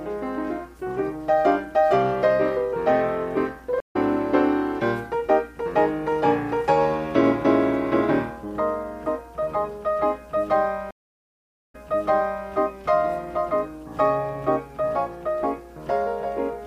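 At 3.80 s a stream reconnect leaves a 131 ms gap, and the audio returns roughly a tenth of a second further on. At 10.91 s a second reconnect goes silent for 817 ms, then resumes 758 ms earlier, repeating audio already heard.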